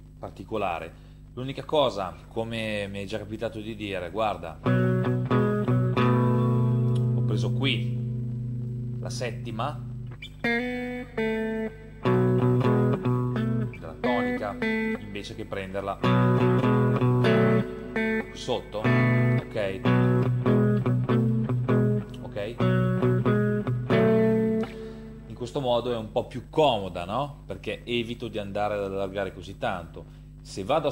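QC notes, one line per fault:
No faults found.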